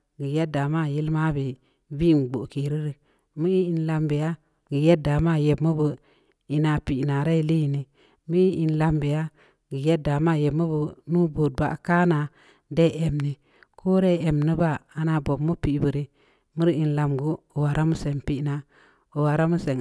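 Nothing in the speech signal points to a technical fault at any point in the recording.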